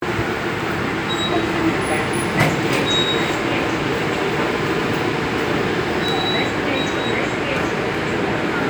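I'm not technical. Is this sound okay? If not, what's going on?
Yes, from a technical standpoint this recording is fine, with nothing wrong in the signal itself.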